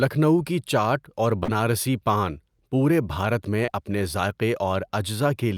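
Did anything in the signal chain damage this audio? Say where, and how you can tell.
Yes, at the network stage: short concealed packet loss, twice. Around 40 ms of the speech arrived too late to decode at 1.43 to 1.50 s, and about 20 ms at 3.66 to 3.70 s. The receiver covered each gap by extending the preceding sound and then crossfading back into real audio. You can hear this as a brief smear or wobble at each point.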